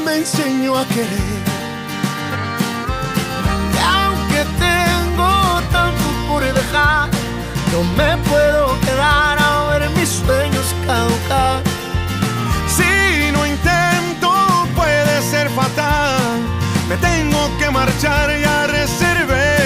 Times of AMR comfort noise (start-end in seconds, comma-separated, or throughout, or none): none